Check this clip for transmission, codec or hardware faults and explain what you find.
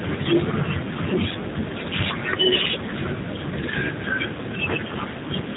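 One codec fault affects the whole clip. Throughout, the speech sounds rough, faintly synthetic and dull, with nothing above 4 kHz. This is G.729 codec damage: each 10 ms frame is rebuilt from a vocal tract filter, pitch predictor and sparse pulses, which fits an 8 kbit/s stream.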